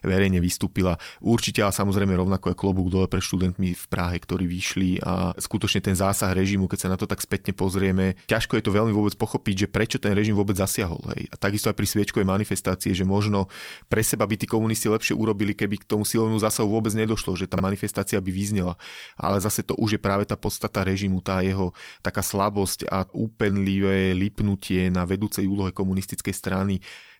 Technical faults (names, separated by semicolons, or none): chunks out of order